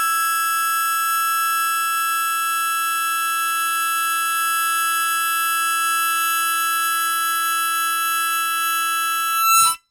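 No technical faults are audible anywhere in the recording.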